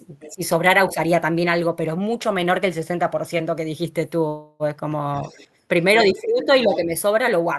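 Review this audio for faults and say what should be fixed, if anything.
Other side's voice leaking through at 0.2–0.34, 0.9–0.94, 5.22–5.45, 6.16–6.20 and 6.40–6.46 s, about 15–30 dB below the talker, likely uncancelled loudspeaker echo.

Speech suppressed in double talk at 0.29–0.41, 0.94–0.98 and 5.97–6.93 s: the talker dips by up to about 15 dB, likely the echo canceller muting during overlap.

Call audio freeze at 4.27–4.63 s: the last sound is continued as a fading buzz or hiss to fill about 324 ms with nothing lost, likely a jitter buffer running empty after delayed packets.

Better echo-canceller tuning for double talk, lower loudspeaker volume or a headset, and a deeper adaptive jitter buffer would prevent these.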